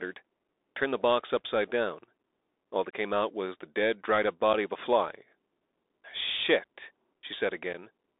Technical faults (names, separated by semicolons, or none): Bluetooth CVSD headset codec; unconcealed Bluetooth headset packet loss